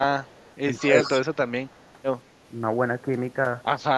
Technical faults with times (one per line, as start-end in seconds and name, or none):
0.08-0.33 speech suppressed in double talk
0.35-1.21 echo leak
0.80-1.24 speech suppressed in double talk
1.67-1.91 echo leak